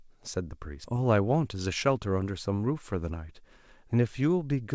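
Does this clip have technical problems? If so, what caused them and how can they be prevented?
Yes. Around 0.84 to 0.95 s there's a skip ahead: most of a second of audio was dropped, probably by an overflowing jitter buffer, and playback jumps straight across the gap. A larger jitter buffer or smoother packet delivery would keep it from discarding audio.

From 1.44 to 2.07 s the jitter buffer speed-up kicks in: the buffer sheds pitch-period slices, roughly 50 ms in total, so the sound runs about 7% fast at unchanged pitch. Steadier network timing avoids the bunched packets that build up that excess delay.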